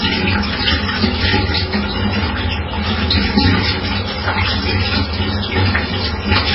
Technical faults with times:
0.00-6.55 MP3 compression

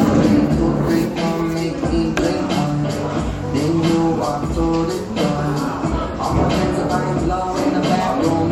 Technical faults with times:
none

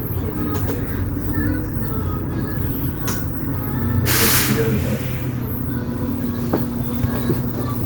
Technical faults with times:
none

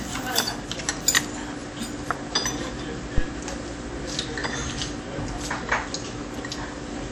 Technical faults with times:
0.00-7.11 WMA compression
3.18-3.29 phantom power thump

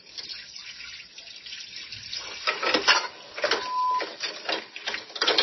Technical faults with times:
0.00-5.42 MP3 compression
3.46-4.04 loudspeaker feedback squeal

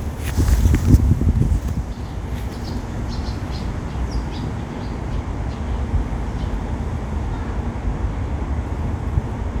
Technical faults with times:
none

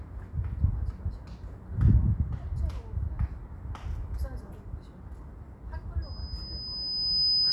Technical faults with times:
6.02-7.52 loudspeaker feedback squeal

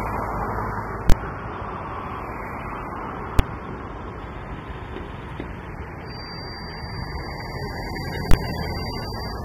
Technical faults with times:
0.00-9.44 AAC compression
1.10-1.12 invalid numbers at full scale
3.39 invalid numbers at full scale
6.01-9.44 feedback whistle
8.31-8.34 invalid numbers at full scale

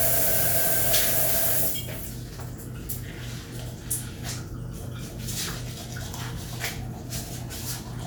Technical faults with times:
none

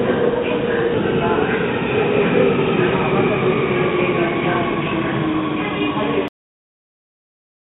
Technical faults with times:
0.94-0.96 skip ahead
6.28-7.74 cut-off end

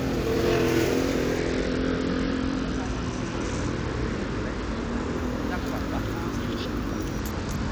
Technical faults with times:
1.38-5.17 Bluetooth SBC bit pool drop
7.19-7.71 Bluetooth SBC bit pool drop

